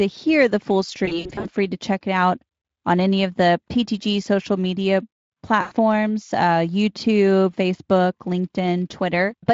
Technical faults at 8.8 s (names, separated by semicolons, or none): none